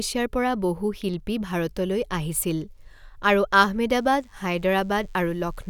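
From 3.92 s until the clip ends at 5.70 s, a DECT cordless phone buzz sits under the speech. A nearby DECT handset or base station transmits a brief radio burst 100 times per second, and some stage in the audio chain rectifies that energy into the signal. The result is a thin, rasping buzz with a 100 Hz fundamental and a dense harmonic series, steady throughout and low in level, about 40 dB beneath the speech.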